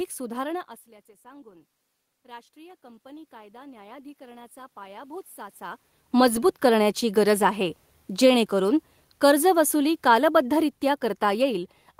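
Automatic gain rising runs from 1.22 to 7.03 s. After the input level drops by about 20 dB, the gain control slowly adds about 11 dB over nearly six seconds. The speech and the room noise behind it swell together, so the background climbs along with the talker.

Automatic gain falling follows from 8.1 to 11.69 s. The gain control judges the input too loud or its background noise too strong and pulls its gain down by about 6 dB over roughly three and a half seconds. The speech starts loud and then sinks, with the room noise dropping alongside it.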